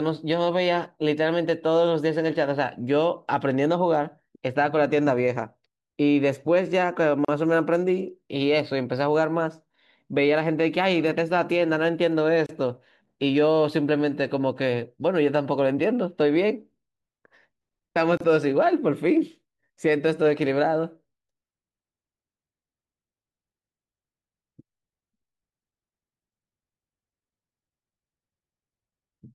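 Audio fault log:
7.25 s, 12.46 s and 18.17 s: gap at a join of encoded pieces. The speech drops out for about 37, 29 and 31 ms, with smeared edges, then resumes where it stopped. Separately encoded pieces were joined with each encoder's start delay and final-frame padding left in.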